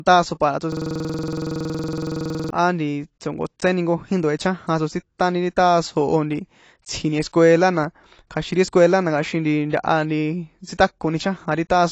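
The speech is dull and smeared throughout, with nothing above 8.6 kHz and a plainly audible warbling texture, likely from AAC compression at a low bitrate near 32 kbps. From 0.72 to 2.50 s, a 46 ms slice repeats dozens of times as a rough 21.5 Hz buzz. That is a system hang loop, where the hardware kept replaying a buffer that fits 2,048 samples.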